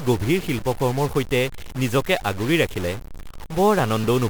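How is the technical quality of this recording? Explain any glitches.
The recording has two clear technical faults. Throughout the speech there is added noise, which also fills the pauses. This is likely a stuck bit: one converter bit frozen, offsetting about half the samples. On a spectrogram it shows as a broadband haze in the silences.

From 3.05 to 4.04 s, just after "সৈতে নিজকে আগুৰি ৰাখিলে", periodic USB or driver dropouts skip roughly a millisecond of audio about five times, every 0.25 s. They are heard as regular ticks, and they appear as evenly spaced waveform discontinuities and thin vertical spectrogram lines.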